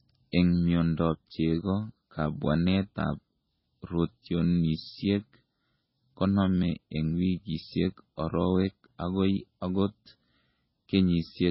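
Heavy MP3 compression at a very low bitrate, likely around 16 kbps, affects this speech throughout: the encoder has discarded everything above 5.6 kHz, leaving it dull, and starved frequency lines flicker between frames, giving a watery, swirling texture with metallic chirps on s sounds and smeared attacks.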